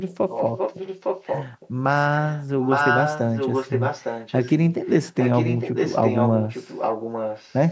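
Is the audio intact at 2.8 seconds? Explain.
No. From 2.16 to 4.52 s there is an echo leak, likely from a far-end echo canceller failing to remove its loudspeaker output picked up by its microphone. A copy of the speech returns about 0.86 s late, at roughly the same level as the speech itself.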